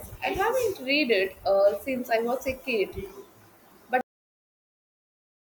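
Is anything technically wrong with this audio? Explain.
Yes. The recording has a cut-off end at 4.01 s. The final stretch of audio was never written out or played back, so the speech is severed mid-sound rather than finishing naturally. From 4.01 s to the end of the clip there is only digital silence. The last syllable does not decay or trail off, and the room tone is also gone. The signal drops straight to silence, leaving an abrupt, truncated ending.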